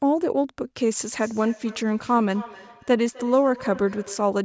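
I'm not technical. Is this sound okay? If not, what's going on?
No. There's feedback echo between two devices: two devices on the same call were near each other, so one microphone caught the other's speaker. From about 1.2 to 4.4 seconds, the speech repeats roughly every third of a second, each repeat thinner and more ringing.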